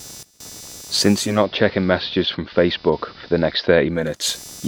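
Throughout the recording, computer activity noise sits under the speech as a buzzy pulsing at around 300 Hz, roughly 20 dB below the signal. Changing processor or peripheral load shifts the shared ground of the audio circuit, so the buzz tracks the machine's activity, not the speech.

At 1.11 s, the digital radio blends to analogue, cross-fading over 0.35 s to the AM broadcast after losing the digital signal. The level drops by about 1 dB, and hiss rises to roughly 40 dB below the signal. The digital signal returns at 4.23 s.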